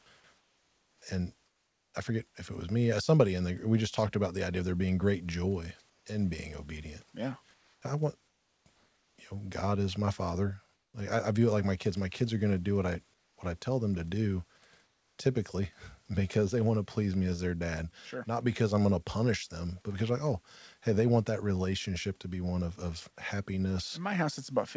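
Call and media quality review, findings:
Comfort noise in place of the background, 0.38–1.94 s, 5.90–6.06 s, 7.54–9.18 s, 10.74–10.94 s, 13.14–13.38 s, 14.84–15.18 s. Room background drops out during pauses and is replaced by a flat, featureless hiss. About 1.1 s replaced in the first gap, about 1.1 s in the third. Likely discontinuous transmission: the sender's voice detector goes quiet and the receiver synthesises noise from sparse level updates. Steps down about 3 dB at 5.90 s and 14.84 s, about 4 dB at 10.74 s and 13.14 s, with background sitting roughly 40–48 dB below the loudest speech.

Onset clipped by the voice detector, 0.98–1.02 s. Speech re-enters abruptly, with about 40 ms of its soft start missing, inside the first comfort-noise gap. Likely the sender's detector was slow to flag resumed speech, so those opening milliseconds were never sent and the receiver played synthetic noise in their place. 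Band limit at 8 kHz from the call codec, consistent with G.722 at 64 kbps.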